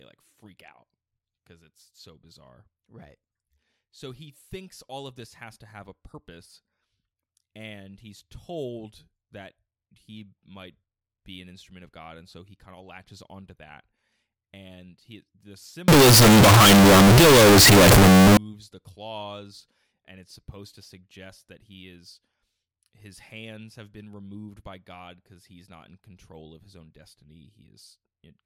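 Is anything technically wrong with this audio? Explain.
Yes. From 15.88 to 18.37 s the speech turns into very loud, harsh distortion, with quiet parts as loud as the rest. This is likely signed and unsigned samples mixed up in 16-bit audio. The flipped top bit turns every zero crossing into a full-range jump.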